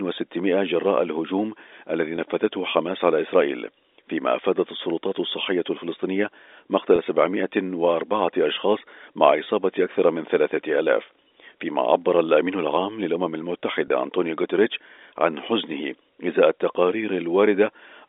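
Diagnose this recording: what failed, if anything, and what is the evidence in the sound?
Packet loss with pitch repetition at 2.16–2.18, 6.96–6.98, 9.44–9.46 and 13.88–13.90 s, at the network stage. Each gap lasts 20 ms, fitting one lost packet, and the receiver bridges it by repeating the last pitch period, heard as a brief held buzz within the band-limited G.711 telephone sound.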